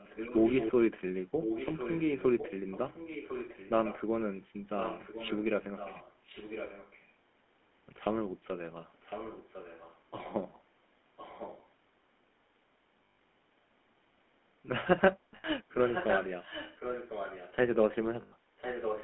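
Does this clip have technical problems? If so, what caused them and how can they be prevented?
Yes. The GSM full-rate codec is heard throughout. It rebuilds the speech from a vocal-tract model driven by sparse, regularly spaced pulses, which makes it buzzy and gravelly. A spectrogram shows energy confined to roughly 200 Hz to 3.4 kHz, with smeared, grainy harmonics. That sound fits a 13 kbps GSM link. Prevention: carry the call over a wideband codec such as AMR-WB or Opus.

Echo leak is heard at 0.0–0.72, 1.42–2.53, 2.71–4.01, 4.78–7.08, 9.01–9.98, 11.17–11.67 and 15.71–17.54 s, and from 18.57 s to the end. A copy of the speech returns about 1.05 s late, roughly 10 to 15 dB quieter. The likely cause is a loudspeaker phone whose echo canceller let its microphone pickup through. On a spectrogram, faint duplicates of earlier syllable patterns sit under later ones. Prevention: the far party should use a headset or a device with better echo cancellation.

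Lost GSM frames occur at 13.04–13.18 s (140 ms), 15.36–15.45 s (80 ms) and 18.22–18.33 s (100 ms). Each gap was patched by repeating the last good frame, heard as a brief metallic ring. The waveform shows a short tonal stretch, and the spectrogram shows frozen horizontal bands there. Prevention: improve radio coverage or signal quality so that fewer frames arrive corrupted.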